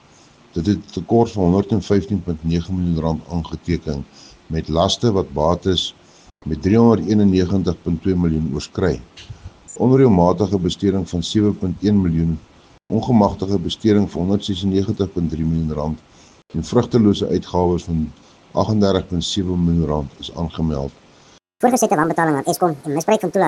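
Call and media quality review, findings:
Section at the wrong speed, 21.39 to 23.48 s: likely clock mismatch in playback or editing, running 1.8x fast. Sound turns hurried and jumps roughly ten semitones higher.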